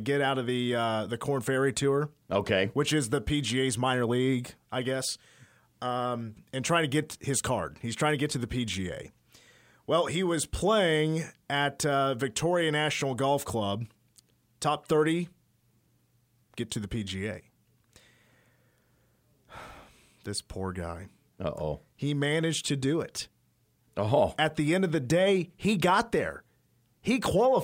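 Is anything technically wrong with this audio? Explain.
No, nothing technically wrong can be heard in this speech recording; the signal stays intact and steady throughout.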